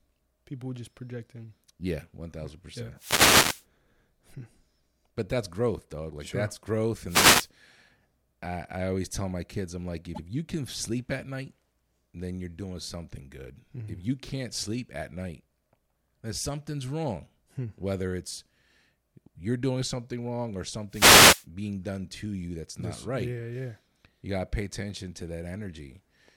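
At 2.96 s, just after "one thousand percent", a wireless microphone noise hit lasts until 3.65 s, and a second follows at 7.06 to 7.50 s, after "sure that's growth". The analogue FM radio link fades as reflected paths cancel the direct signal, so the receiver's noise floor rises through the speech and comes through as a brief swish of static.

At 10.14 s, after "my kids I'm like" and before "you can sleep at", there are repeated frames. A 72 ms block of the speech plays a second time, which fits a short run of compressed frames being sent or written twice. It is heard as a quick stutter, and the clip runs 72 ms longer.

A third wireless microphone noise hit runs from 20.89 to 21.46 s, another static burst from a fade in the radio signal.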